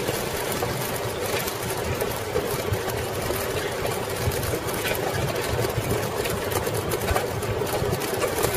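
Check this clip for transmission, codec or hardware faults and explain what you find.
Nothing in the clip points to a transmission, codec or hardware fault. I hear no event that calls for a timestamp or a closer look.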